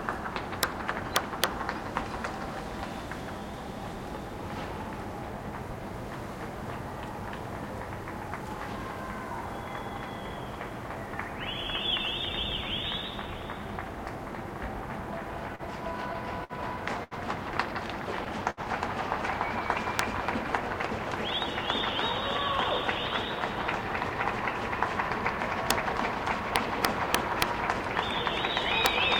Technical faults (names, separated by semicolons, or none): integer overflow; short stall from a late packet